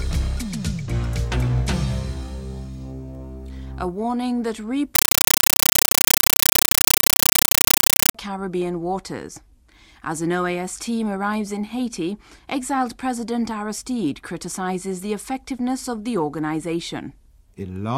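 Compressed stream played as audio, 4.95 to 8.15 s: undecoded data, fitting an AC-3 stream, is heard as loud chattering static of 8 ms bursts repeating at 31.25 Hz.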